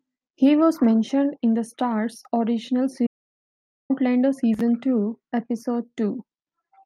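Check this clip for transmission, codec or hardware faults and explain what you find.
One fault is present in this speech clip: an audio dropout to silence from 3.07 to 3.90 s, losing about 0.83 s. The input was likely lost while recording continued, writing silence. Unlike a natural pause, the room tone vanishes and the speech cuts off and resumes abruptly.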